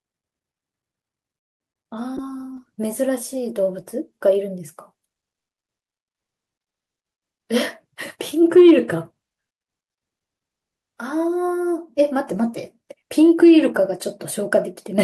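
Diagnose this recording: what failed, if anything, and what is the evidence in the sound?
The trouble sits on the network side of the call, working through the receiver's jitter buffer. From 1.37 to 1.62 s the sound stalls. The last sound carries on briefly, then about 0.22 s of near silence, and it resumes where it stopped. That's a call audio freeze, likely caused by delayed packets starving the buffer, which puts in about 0.23 s of extra delay.

Right after, from 1.84 to 1.87 s, there's a short concealed packet loss. About 20 ms of audio never made it to the decoder in time. The receiver bridged the hole by extending the preceding sound, so you hear a quick smear or wobble rather than a clean dropout.

From 2.18 to 4.45 s there's a call bitrate drop. The encoder went from 64 down to 28 kbps and stayed at the bottom for roughly 1.44 s. With fewer bits the coding gets coarser, so the audio turns rougher until it recovers.

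Between 6.92 and 9.48 s a jitter buffer speed-up kicks in. The buffer had built up more delay than it wants, so the receiver trimmed tiny pitch-period slices, around a fifth of a second in total. Playback runs at about 108% speed with unchanged pitch, sounding hurried.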